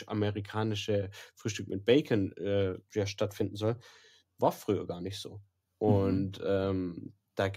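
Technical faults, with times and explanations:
No technical faults can be heard anywhere in this speech recording. Nothing in the audio calls for a time or an explanation.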